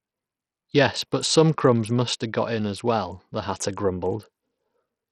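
From start to finish, the speech carries heavy damage of the kind you get from Bluetooth SBC compression, likely squeezed at a low bitrate somewhere around 64 kbps. SBC splits the signal into a handful of wide frequency bands and hands out bits without any real model of hearing, so with a small budget the top bands get starved and the rest are coarsely quantised. That's why the treble drops away and flickers, with a gritty, aliased edge sitting over everything.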